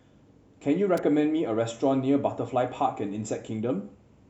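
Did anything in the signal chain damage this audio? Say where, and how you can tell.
Yes. A sharp snap in the analogue wiring sits on top of the speech at 0.97 s, peaking around -20 dBFS. This electrical switching spike was likely picked up from a nearby switch arcing.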